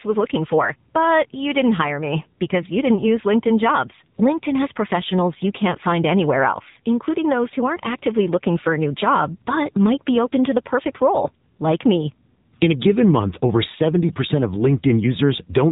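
Throughout, the speech carries AMR narrowband mobile codec damage. Nothing passes above 3.8 kHz. The buzzy, synthetic texture points to a low rate near 7.4 kbps.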